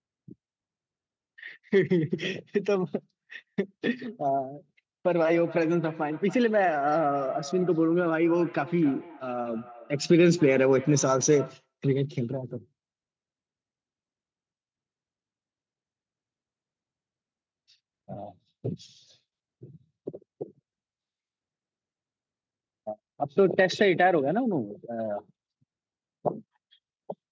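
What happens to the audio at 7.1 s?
At 7.1 s you're inside a feedback echo between two devices, running 5.32 to 11.68 s: a second device replays the speech into the mic, so it comes back roughly every third of a second, about 17 dB down.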